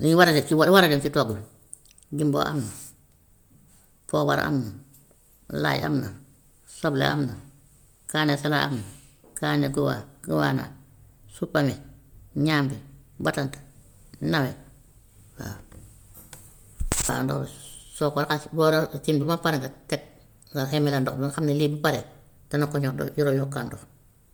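Throughout, the speech carries a plainly audible grainy, breathy top end, likely Bluetooth LC3 compression noise-filling upper bands it zeroed, with nothing above 20.2 kHz.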